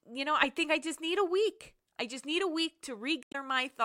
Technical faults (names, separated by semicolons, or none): damaged data in a compressed stream